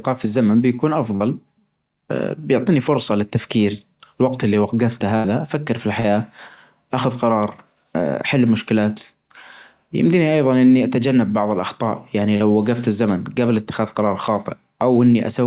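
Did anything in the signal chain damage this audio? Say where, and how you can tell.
Yes. Short concealed packet loss at the network stage breaks the audio at 1.16, 6.00 and 12.36 s. Each time about 40 ms never arrived, and the receiver stretched the preceding sound to cover it. On a spectrogram, which stops at 4 kHz here, each spot shows briefly frozen harmonics or flat noise and a smeared onset.

A burst of packet loss hits at 5.16 to 5.27 s, with about 80 ms filled and 80 ms missing. The last sound is held as a buzz or hiss and turned down. The waveform shows a decaying, repetitive stretch, then a jump where the audio resumes further on.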